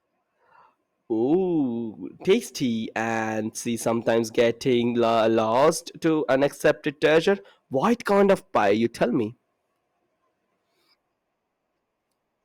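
Hard clipping hits the speech peaks at 1.33 s, then 2.29 to 2.33 s, 2.96 to 3.22 s, 3.88 to 5.69 s, 6.07 to 7.31 s and 7.83 to 9.04 s. The overdrive runs from about 1 dB to about 7 dB, so the brief early hits crackle and the long later stretches become a harsh fuzz. On a waveform the peaks are sliced flat, and on a spectrogram smeared harmonics streak upward.

From 9.36 s to the end, the adaptive stream drops to a lower bitrate with no gap. Codec artefacts rise, consistent with Opus falling from 64 to 24 kbit/s. The change in quality is sudden.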